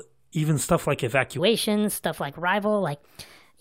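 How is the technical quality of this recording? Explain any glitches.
From 1.39 s to the end, a section at the wrong speed: likely a playback clock mismatch running it 1.29 times fast, lifting the speech about four semitones, high and hurried.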